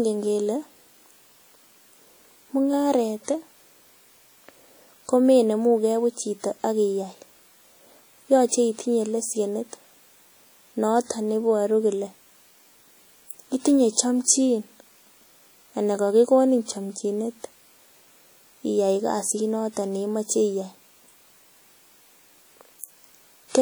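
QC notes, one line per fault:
Throughout, WMA compression: a transform codec, likely WMA at a rate that fits about 48 kbps, spreads its quantisation noise over long blocks and drops weak spectral lines, so the speech rings and sounds washy, with a hiss breathing alongside it, the damage plainly audible.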